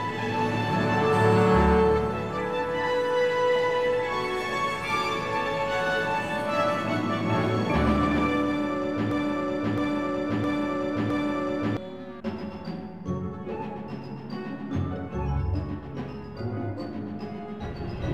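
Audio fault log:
9.11–11.77 s, broken-record loop: a 0.66 s fragment repeats exactly four times back to back, displacing the intended audio; likely a stalled stream resending its last buffer.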